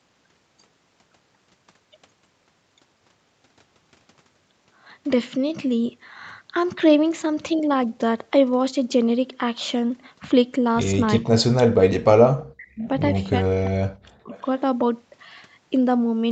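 A speech recording in which the voice is pushed down by as much as about 40 dB at 11.19 to 11.28 s, 11.47 to 12.87 s and 13.37 to 14.33 s, likely speech suppressed in double talk. Faint delayed copies at 12.82 to 12.88 s and 14.33 to 14.49 s, lagging 354 ms and sitting about 30 to 35 dB under the speech, are likely echo leak. A fixed delay like this separates echo from room reverberation.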